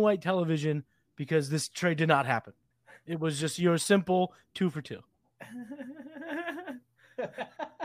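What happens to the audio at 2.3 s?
Nothing goes wrong at 2.3 s; the speech runs through that moment intact, with no dropout, click, glitch or other fault.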